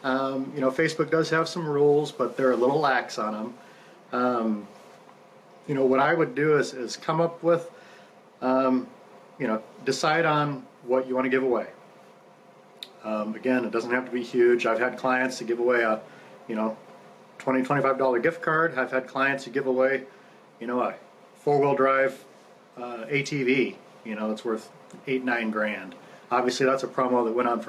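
The input gain was likely set far too high for the microphone, leaving a fast limiter or compressor to haul the level down on every loud sound, which produces gain pumping across the whole clip. Each loud moment pulls the level down, a swing of roughly 5 dB. Loud and quiet passages sit unnaturally close in level, and the sound comes across squashed.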